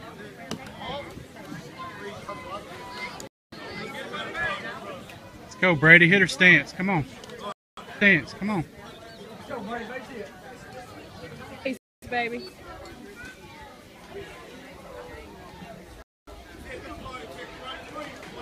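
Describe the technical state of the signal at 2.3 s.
At 2.28 s there is damaged data in a compressed stream: corrupted bytes make the decoder lose frame sync and resynchronise, producing a brief chirp, squawk, click or short hole.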